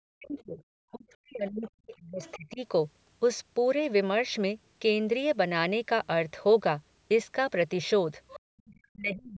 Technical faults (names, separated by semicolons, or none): speech suppressed in double talk; other side's voice leaking through